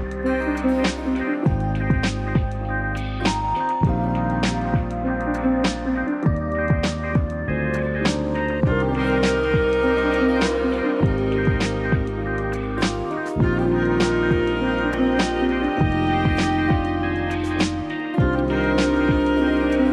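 At 9.97 s and again at 14.94 s the sound jumps forward with no gap, skipping roughly 30 ms and then roughly 20 ms. This is most likely a dropped buffer (overrun): samples went uncollected before being overwritten, so the surrounding audio was spliced directly together.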